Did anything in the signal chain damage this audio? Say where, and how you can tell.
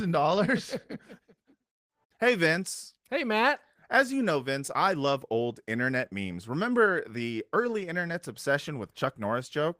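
No, nothing damaged it.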